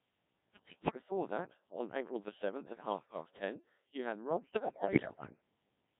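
The whole clip runs through the Codec 2 vocoder, and it's heavy. The speech comes out robotic and buzzy because the decoder rebuilds it from sine waves using just pitch, voicing, energy and envelope, which fits the 1.3 kbit/s mode. Then there are two bursts of bit errors on digital voice radio. From 0.54 to 0.95 s, just before "that on", the voice lurches in pitch and level and breaks into warbly gibberish. It happens again from 4.44 to 5.30 s, right after "past ten you had", with bleeps and tone-colour jumps. Roughly one bit in ten looks corrupted, scrambling whole frames' parameters.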